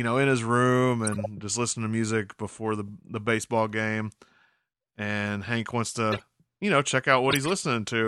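Corrupt frame decoded at 1.05–1.26 s, between "know in his room" and "just listening to music", again at 6.11–6.22 s just before "you know check", and at 7.30–7.50 s right after "you know check". Each time, damaged compressed frames were decoded and played anyway, so misread codes and gains threw energy into the wrong frequencies. The result is a short chirpy burst peaking around about -15 dBFS, with the last one louder at about -10 dBFS. Its length points to several consecutive bad frames.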